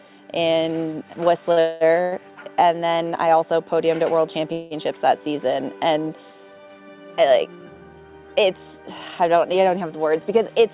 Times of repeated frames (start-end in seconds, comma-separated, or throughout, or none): none